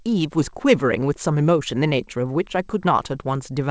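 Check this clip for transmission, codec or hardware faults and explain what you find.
Nothing faulty can be heard in this speech recording.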